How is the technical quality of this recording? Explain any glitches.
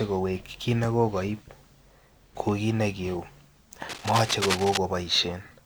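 The recording has one clear glitch: a burst of cable scratch noise from 3.88 to 4.78 s, lasting just under a second. Dense, irregular crackling and rustling sits over the speech, only a little quieter than the speech itself. The likely cause is a worn lead, connector or control being moved, so that its contact resistance fluctuates rapidly and injects uneven noise bursts straight into the signal path.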